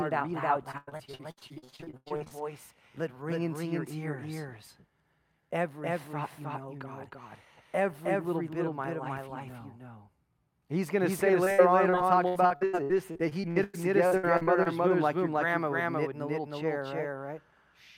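Doubled audio track runs through the whole clip. A second full-band copy of the speech trails the original by roughly a third of a second at about the same level, with no decay or room colour, so every syllable has a dry, equally loud echo. The likely cause is the same signal reaching the mix twice, once through a slower path or as an edit that leaves two copies out of step.

Repeated packet loss (robotic sound) begins right after "read it out loud" and lasts from 0.71 to 2.32 s. Packets went missing or arrived late again and again, and each hole was patched by stretching the last bit of sound before the next hole arrived. Nearly half of this span is concealment, with gaps up to 99 ms, so the speech turns choppy with pieces missing.

Repeated packet loss (robotic sound) returns from 11.44 to 14.68 s, between "going to say" and "womb like your grandma". The same cycle of lost packets patched by repeating the preceding sound produces choppy speech with pieces missing. 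Here about a quarter of the span is concealed, with gaps up to 96 ms. The stretch is longer than the first, but the dropouts are sparser.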